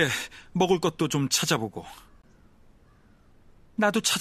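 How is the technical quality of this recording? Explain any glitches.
The speech has one glitch: a brief dropout at about 2.22 s.

At 2.22 s, a gap between stream segments puts roughly 17.5 ms of silence into the speech. The timestamps of two adjoining segments don't quite meet, and the player fills the hole with digital silence. The result is a short, hard-edged cut with abrupt onset and release, heard as a tiny tick or stutter. Nothing is removed, since the silence is inserted and the speech after it simply arrives later. Only one gap occurs, which fits segments about six seconds long.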